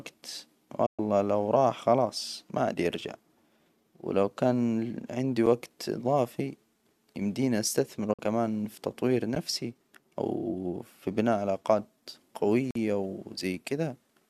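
At 0.86 s the speech falls away into a digital broadcast dropout lasting until 0.99 s, just before "لو راح خلاص ما". The receiver stopped getting usable frames and muted, so about 120 ms of sound is simply missing, consistent with five lost frames of roughly 24 ms. A second dropout runs from 8.13 to 8.19 s, between "يمدينا أستثمره" and "في تطوير", swallowing about 48 ms. Each dropout enters and leaves through a quick 8 ms fade, so the hole sounds soft-edged rather than clicked.

The blocks of digital silence are different: samples were zeroed outright, with no fade. At 5.46 s a 6 ms gap registers as a sharp tick. At 9.35 s, right after "في تطوير", a 12 ms gap fits one 512-sample buffer not filled in time and sounds like a tick or dip. The longest, from 12.71 to 12.75 s, lasts about 46 ms. Its length points to a 2048-sample buffer, and it comes across as a brief hole.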